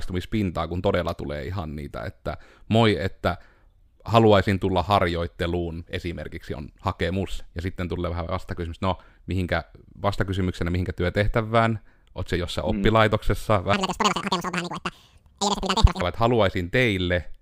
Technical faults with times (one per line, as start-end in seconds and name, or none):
13.73-16.01 section at the wrong speed